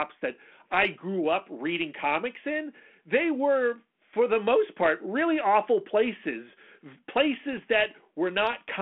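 Bit errors on an ADPCM link strike this speech clip at 4.84 to 4.88 s, between "were for the most" and "really awful places", and again at 7.53 to 7.59 s, the second much sparser. Each flipped bit knocks the decoder's step size and predictor off track, so a pop spreads into a short rough burst with a brief level jump. The band stops near 3.4 kHz, with light coding grain that points to 32 kbit/s G.726.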